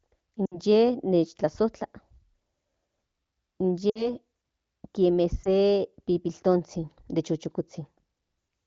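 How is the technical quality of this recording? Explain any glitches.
The recording has three short dropouts from lost AMR speech frames, at 0.45 to 0.59 s, 3.90 to 4.10 s and 5.43 to 5.49 s. Corrupted frames failed their checks, so the wideband decoder filled the gaps by reusing the last good pitch and vocal-tract settings at falling gain. The first two gaps last about 60 ms, which fits three lost 20 ms frames; the speech briefly smears and fades before recovering slightly rough. The 20 ms gap at 5.43 s is a single quick dip or warble.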